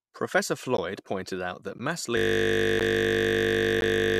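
At 0.77 s and 1.78 s there are gaps between chunks, 13 ms silent holes with hard edges spaced exactly one second apart. That regular spacing marks them as chunk joins rather than random dropouts. From 2.17 s, right after "pointed out that mass", a system hang loop begins and lasts to the end. A single 20 ms piece of buffer repeats, giving a steady 50 Hz buzz rather than a stutter. The chunk gaps continue inside the buzz at 2.80 s and 3.81 s.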